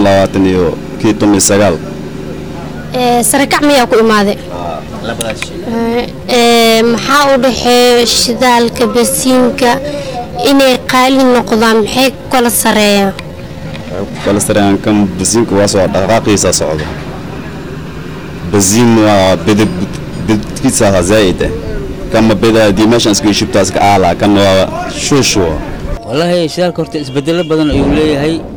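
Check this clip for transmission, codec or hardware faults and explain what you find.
Two faults are present: overload distortion across the whole clip, and a slowed section in the middle.

Hard clipping runs throughout: driven about 12 dB past full scale, a large share of peaks are cut flat, adding a harsh fuzz rather than the intermittent crackle of brief overs.

From 5.71 to 14.27 s, a time-stretched section plays at 0.683 times speed with pitch unchanged. It is likely caused by software repeating short pieces, which gives the dragging pace that sets it apart from a tape slowdown, where pitch would drop.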